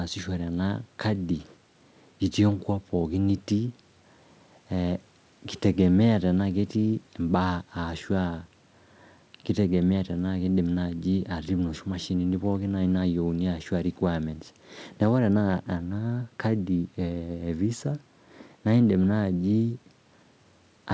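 Speech clip with no audible technical faults.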